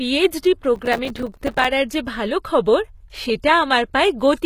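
Throughout the speech the top end is bright but synthetic: sibilants sound gritty and metallic, and nothing is present above 14.9 kHz. This is likely HE-AAC compression at a low bitrate, near 20 kbps, where treble is rebuilt from copied lower bands rather than coded directly.

From 0.76 to 1.65 s, processor overload crackle tears through the sound. The processor repeatedly failed to deliver its very short buffers, a few milliseconds each, in time. Dozens of dropouts, each filled with silence, produce a dense, rough crackle that stops once the load clears.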